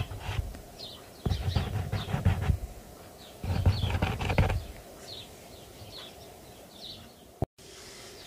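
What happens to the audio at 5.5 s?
Nothing goes wrong at 5.5 s; the audio plays through that moment intact, with no dropout, click, distortion or other fault.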